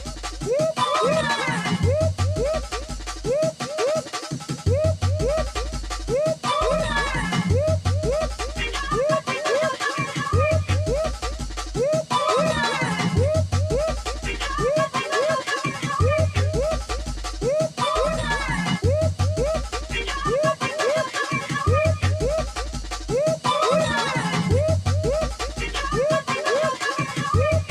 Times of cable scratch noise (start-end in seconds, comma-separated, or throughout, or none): none